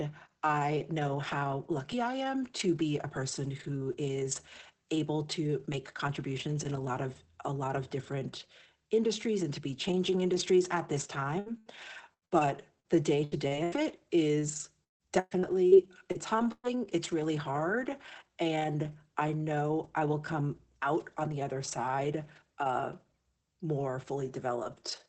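Just after "changing industries at this", from 11.39 s to 16.68 s, the speech turns choppy, with pieces dropping out until "it's really hard and". This is repeated packet loss (robotic sound): more than a dozen gaps, the longest about 0.16 s, each patched by stretching the preceding sound.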